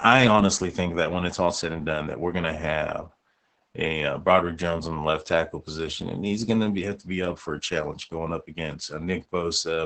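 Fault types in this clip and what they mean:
Opus voice compression: the speech runs through Opus's SILK speech coder throughout, band-limited so nothing reaches past about 8.6 kHz, and the excitation is coded so coarsely that voices turn muffled, hoarse and a bit robotic, which points to roughly 10 kbps.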